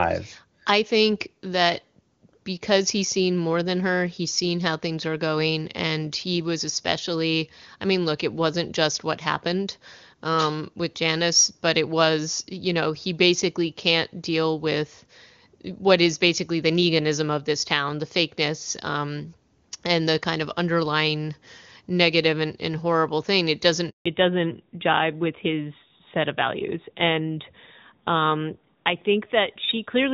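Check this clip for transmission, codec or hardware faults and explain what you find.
Two faults appear near the end of this speech.

From 23.90 to 24.06 s, right after "and horrible thing it", the speech cuts to silence for 160 ms: a handover gap, where no speech frames arrived while the call switched networks.

From 24.06 s to the end, the speech turns duller and rougher, with nothing above 4 kHz. This is a fallback to narrowband. The clear HD Voice (AMR-WB) sound earlier gives way to a narrowband codec, which fits AMR-NB at 12.2 kbit/s.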